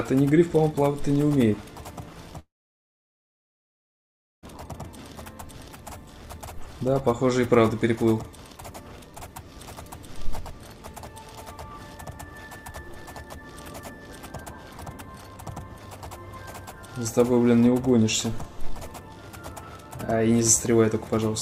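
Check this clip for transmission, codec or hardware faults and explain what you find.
One fault is present. From 2.39 to 4.46 s, about 2 s of audio is missing, most of it silent. This is likely a long network dropout, where the receiver ran out of packets and resumed later without the lost stretch.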